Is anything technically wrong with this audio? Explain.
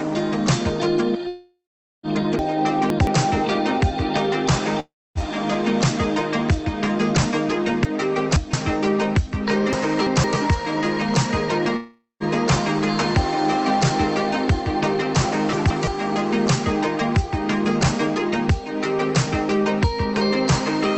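Yes. Long network dropouts occur at 1.27–2.06 s, 4.80–5.18 s and 11.76–12.23 s, likely from lost packets. Each shows a fading buzzy fill, then a flat, near-silent waveform gap before the audio resumes.

Chunks out of order appear at 2.39–3.07 s, 7.85–8.53 s, 9.73–10.24 s and 15.53–15.87 s. Blocks of about 171 ms play late, sounding jumbled. The spectrogram shows abrupt vertical seams at each join.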